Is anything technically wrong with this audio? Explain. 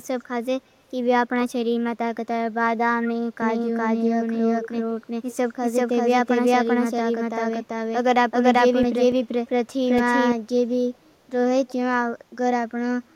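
Yes, there are three separate problems.

From 3.42 to 10.32 s there's a doubled audio track: a second, full-band copy sits about 400 ms behind, at roughly the same level, with no room colour. It cuts in and out abruptly, likely from a second, slower capture path or a misaligned edit.

There's also echo leak in three short scraps: 4.61–4.69 s, 5.29–5.36 s and 11.68–11.73 s. A delayed copy turns up about 150 ms late, at about 10, 20 and 25 dB down. That's likely a loudspeaker-side echo canceller letting some residue through.

Between 8.54 and 9.99 s you get CD scratch ticks, six of them, the longest only a few milliseconds. A blemish on the disc wipes out more data than error correction can rebuild, so the player patches or mutes those samples, and you hear brief clicks.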